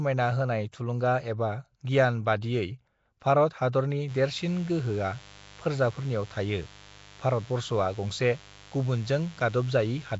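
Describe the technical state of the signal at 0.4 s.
At 0.4 s the speech carries Nellymoser compression, present across the whole clip rather than at this moment alone. The sound has a rough, hissy halo and a smeared, underwater quality, and nothing sits above 7.7 kHz. The likely cause is the Flash-era Nellymoser Asao codec at a rate that fits about 32 kbps, which spends few bits per sample and fills weak bands with noise. A spectrogram shows a hard ceiling at 7.7 kHz and blotchy, noisy patches between harmonics.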